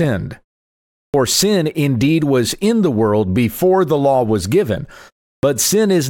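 The output device sleeps during silence and is slow to wake, causing a clipped start after a pause: at 1.09 s, following a 0.73 s gap, about 48 ms is swallowed before "sin indeed was in". At 5.38 s, after "the law was given" and a 0.36 s gap, about 51 ms goes missing, so the sound bursts in abruptly without its onset.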